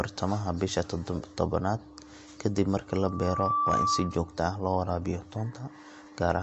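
MP3 compression runs through the whole recording: nothing survives above 7.9 kHz, and the speech has a watery, swirly quality with smeared consonant attacks. The likely cause is an encoder short of bits, which fits a low bitrate near 48 kbps.

Loudspeaker feedback squeal enters from 2.90 to 4.35 s, ending just before "ah loo waraabiyaa". The microphone re-captured its own loudspeaker until a 1.2 kHz tone fed on itself. It swells over most of a second into a squeal about 5 dB above the speech.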